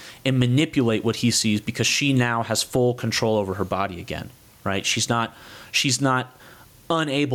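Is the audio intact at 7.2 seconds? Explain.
No. Gain pumping runs through the whole speech clip, including 7.2 seconds. The gain swings by about 10 dB, bringing loud and soft parts closer in level so the sound is squashed. The likely cause is excessive input gain, with a fast limiter clamping every peak.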